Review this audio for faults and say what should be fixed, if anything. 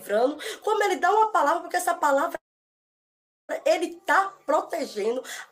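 From 2.35 to 3.51 s there is a call audio freeze. The sound smears briefly, then drops to about 1.1 s of flat-line silence, visible as a blank spectrogram column. It then resumes where it stopped, with nothing lost, the likely result of late packets emptying the jitter buffer. Preventing it means steadier network delivery or a larger adaptive jitter buffer that absorbs late packets before playback starves.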